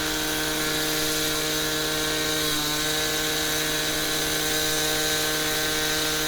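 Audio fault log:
0.93–0.95 s, loud pop: a single sharp pop sits on top of the sound, peaking roughly 10 dB above it, while the sound continues underneath. It is likely a brief voltage pulse from a plug, switch, static discharge or driver glitch, shaped by the following circuitry.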